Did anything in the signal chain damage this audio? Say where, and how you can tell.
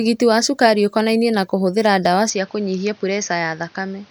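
Yes. Right after "ũkonainie na kũhũthĩra ndawa", at 2.30 s, the speech abruptly turns duller and a few dB quieter, likely an input switched to a poorer device at the driver stage. A spectrogram shows the band above 6.6 kHz going empty with no gap, and a new noise floor appearing.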